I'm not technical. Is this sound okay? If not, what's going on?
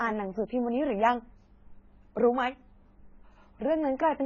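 No, the speech sounds dull and a bit watery from start to finish, with nothing above 7 kHz, so the crisp top end is gone and s sounds smear. That's likely AAC compression, squeezed hard enough to throw away detail.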